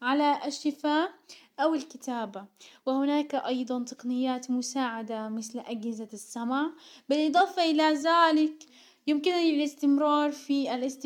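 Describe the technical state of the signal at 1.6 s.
At 1.6 s the signal is intact, with no dropout, distortion or other fault audible at that point.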